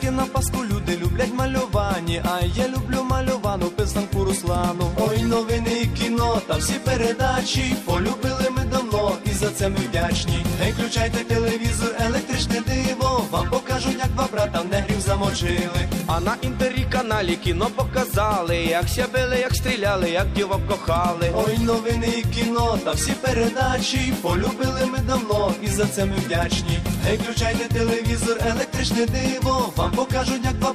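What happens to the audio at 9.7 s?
Nothing goes wrong at 9.7 s; the audio plays through that moment intact, with no dropout, click, glitch or other fault.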